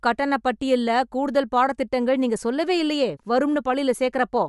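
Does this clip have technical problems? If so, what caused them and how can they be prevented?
Yes. Throughout, the speech stops dead at 11.5 kHz and carries a plainly audible grainy, breathy edge, likely from Bluetooth LC3 compression, which fits 10 ms frames at about 48 kbps. To prevent it, record over a wired connection or use a higher-bitrate Bluetooth link.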